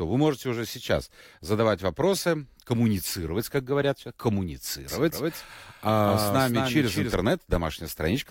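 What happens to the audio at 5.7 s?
At 5.7 s the speech is heard twice. A doubled audio track runs from 4.88 s to 7.14 s. A second copy follows about a fifth of a second behind, a few decibels quieter than the original. It is full-band, with no decay or room colour. It starts and stops abruptly at the span's edges. The likely cause is the audio being captured again through a slower path and mixed back in.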